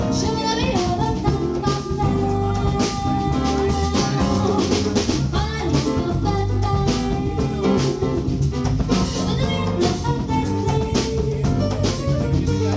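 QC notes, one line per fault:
No faults heard anywhere in the clip; nothing to log.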